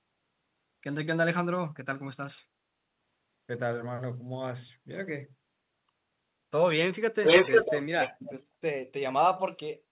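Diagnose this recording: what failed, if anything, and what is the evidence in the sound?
Echo leak, 7.23 to 8.33 s, at the call-processing stage. A second copy of the speech arrives about 500 ms behind the original, somewhat louder than the speech itself and band-limited to 4 kHz like the rest of the narrowband call audio. The likely cause is a far-end loudspeaker feeding its own microphone: the echo canceller there failed to subtract that pickup, so the residue was encoded and returned down the call as a delayed duplicate.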